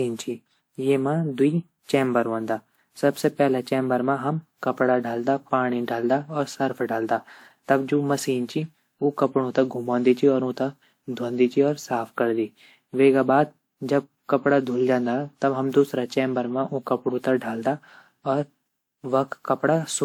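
From start to end, the speech shows generation loss, likely from being decoded and re-encoded around seven times through the lossy WMA codec at 128 kbit/s. Each pass re-quantises on a shifted frame grid, so the sound turns swirly, hollow and smeared, with softened consonant attacks.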